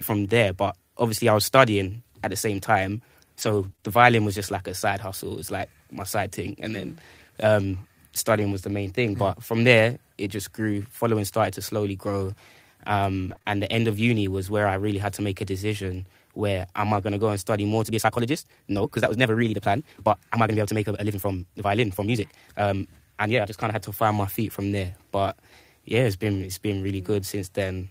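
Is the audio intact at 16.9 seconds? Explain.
No. From 16.94 to 17.04 s there is a lost packet rebuilt from error correction. The next packets carried low-bitrate copies, so the decoder filled about 60 ms without a gap. That stretch sounds rougher and noisier, which fits three lost packets.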